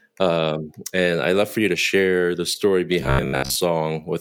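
A speech clip where, from 3.01 to 3.56 s, just after "to share the story", the voice collapses into a rigid metallic buzz at about 67 Hz: robotic sound from repeated short buffers, likely from audio arriving too seldom so a roughly 15 ms chunk was looped over most of that stretch.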